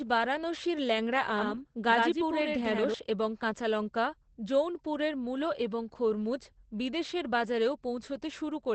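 From the first moment to the end, the speech sounds muffled and hoarse, with a slightly synthetic, robotic edge and nothing above about 8.5 kHz. This is Opus voice compression in its SILK mode, limited to the wideband range. At the rate the damage points to, around 12 kbps, the linear-prediction coder has so few bits that it models the vocal excitation coarsely in each 20 ms frame, so breathiness and fine texture turn rough and plainly audible.

From 1.38 s to 2.94 s the speech takes on a hollow, stuttering slap. A second, full-bandwidth copy trails the original by roughly a tenth of a second, only a few decibels quieter, with no reverberant tail. It cuts in and out abruptly at both ends. This is a doubled audio track, likely caused by the same signal reaching the mix twice, once through a slower path, so the two copies sit out of step.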